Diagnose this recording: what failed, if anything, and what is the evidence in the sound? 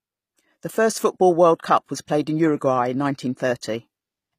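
Codec stage: s sounds turn gritty and lispy throughout, with nothing above 15.5 kHz, likely HE-AAC compression rebuilding the treble from copied lower bands at a low bitrate.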